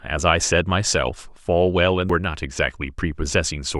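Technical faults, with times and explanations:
2.10 s: damaged data in a compressed stream. Corrupt data makes the decoder lose sync and hunt for the next frame header, causing a brief glitch.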